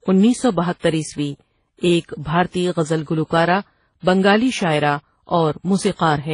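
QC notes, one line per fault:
Throughout: transcoding between lossy codecs. The speech carries two different kinds of codec artefact heard together, and nothing at all above 10.1 kHz. That mix of two different kinds of artefact likely comes from a very low-rate HE-AAC encode being re-encoded to WMA at a modest rate. The second encoder wastes bits copying the first one's damage, adds its own, and the lowest cut-off in the chain carries through.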